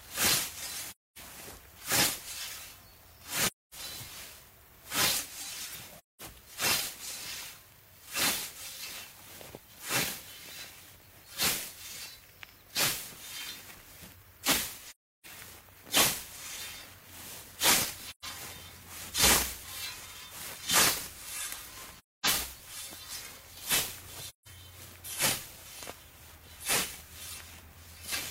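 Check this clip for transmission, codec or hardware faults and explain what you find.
The audio drops into soft silence seven times, from AAC frame loss with muting. The gaps fall at 0.89–1.18, 3.45–3.74, 5.97–6.21, 14.88–15.26, 18.09–18.25, 21.96–22.27 and 24.26–24.48 s, each roughly 0.13 to 0.34 s long. The sound fades out, vanishes, then fades back. Whole coded frames went missing, and the decoder replaced their spectra with zeros. Overlapping transform windows then taper the sound on either side of each hole.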